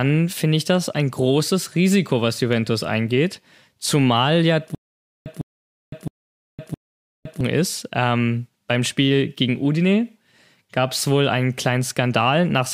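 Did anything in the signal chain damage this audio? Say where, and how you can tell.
Yes: a stutter with silent gaps from 4.75 to 7.41 s, likely a playback or stream stall. The same 154 ms burst repeats four times, each followed by about 511 ms of silence (a 664 ms period). The waveform shows identical blocks between flat stretches, the spectrogram matching patches between blank columns.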